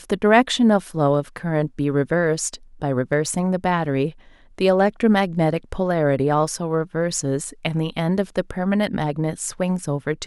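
Speech runs through a steady soft rattle of clock slip clicks from 0.16 s to 10.21 s, around 150 single-sample ticks spaced roughly 70 ms apart and clearest on louder passages. The likely cause is two unsynchronised clocks drifting by roughly 300 ppm, forcing a sample to be dropped or repeated whenever the gap reaches one sample. A spectrogram would show faint, evenly spaced thin vertical lines; the waveform would show tiny one-sample discontinuities.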